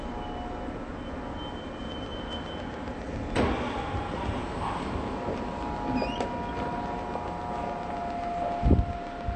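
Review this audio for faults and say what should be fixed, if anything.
Dull, smeared and plainly warbly throughout, with nothing above 8.6 kHz: likely AAC compression, whose band-limiting and coarse quantisation fit a low rate near 32 kbps AAC-LC. Encode at a higher bitrate, or keep an uncompressed master.

A regular ticking at 7.27 clicks per second runs from 1.92 s to 9.22 s, around fifty clicks peaking roughly 10 dB above the sound, likely a train of clicks from interference or a faulty connection. Shield or separate nearby equipment and check the interface's connection and power supply before recording again.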